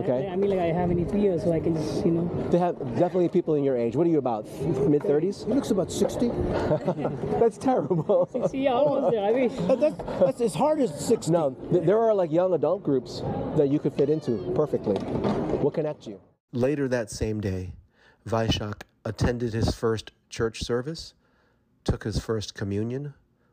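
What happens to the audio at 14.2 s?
Nothing goes wrong at 14.2 s; the audio plays through that moment intact, with no fault.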